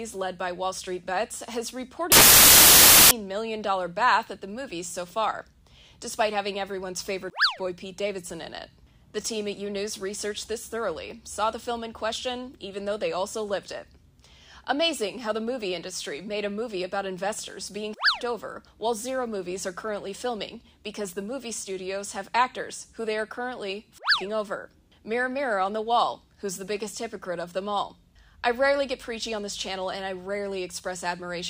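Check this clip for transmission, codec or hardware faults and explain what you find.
One fault turns up. From 2.12 to 3.11 s the audio gives way to loud, harsh broadband noise. These are samples built from the wrong bytes: misordered or misaligned bytes push the rapidly changing low bits into each value's high end.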